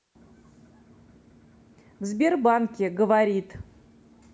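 Nothing in this speech recording stood out as a technical problem on listening.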